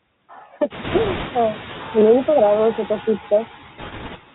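From the start, the speech comes through a Bluetooth CVSD headset codec, and the damage is plainly audible. Nothing above 4 kHz survives, so the sound is boxed into a narrow telephone band. Because the encoder sends only a single up-or-down bit per sample, which fits a 64 kbps CVSD stream, loud high sounds outrun its adaptive step. S sounds turn scratchy and a granular hiss rides under the speech. That hiss tracks the speech level, unlike steady background noise.

Noise suppressor artifacts are also present throughout, though the suppressor pulls the noise down by only about 2 dB. At around half a second the room noise rises by about 17 dB and settles about 18 dB below the speech. The suppressor then works frame by frame against that higher floor, so the leftover noise dips slightly in gaps and swells under speech. That pumping follows the pauses, while the codec hiss follows the waveform itself.

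From 0.84 to 1.27 s, and again from 3.78 to 4.18 s, there are bit errors on a Bluetooth voice link. Around five percent of bits are flipped in the first stretch and around four percent in the second. Each CVSD bit carries the same small weight and a wrong step fades out, so there are no sharp clicks or dropouts. The speech is instead overlaid with a rushing, crackly noise that starts and stops with these windows, setting it apart from the constant codec grain.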